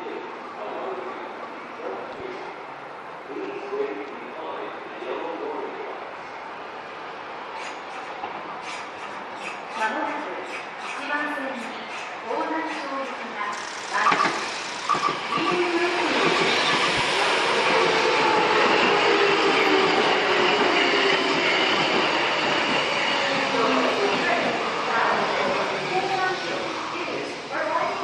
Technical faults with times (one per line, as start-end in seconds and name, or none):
none